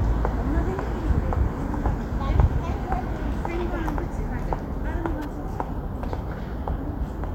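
From 5.22 to 5.25 s a short chirp-like blip appears in the sounds: a corrupt frame decoded, its flipped bits throwing energy into wrong frequencies across a couple of frames.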